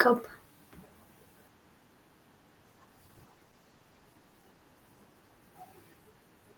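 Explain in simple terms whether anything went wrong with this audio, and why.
From about 2.66 s to 5.05 s the speech turns rougher and less clear. This is a call bitrate drop: the connection's estimate of available bandwidth fell, so the call squeezed the audio into about half as much data, and detail was lost. The worst stretch lasts roughly 1.3 seconds before quality recovers. Unlike packet loss, nothing goes silent or skips. The sound keeps flowing but gets coarser, and only for this window.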